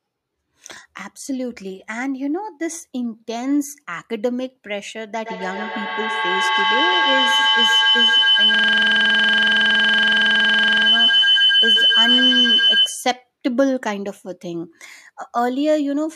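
From 5.19 s to 13.22 s a feedback howl develops. Sound from a loudspeaker re-enters a microphone on the same call with gain on each pass, so it narrows to a tone near 3 kHz, with a loop delay of roughly a tenth of a second, and peaks about 7 dB above the speech.

Between 8.55 s and 10.87 s a system hang loop overlaps it. The driver stalled while the hardware kept replaying one 46.44 ms slice, which fits a 2048-sample buffer. That slice repeats dozens of times, producing a rapid 21.5 Hz stutter-buzz.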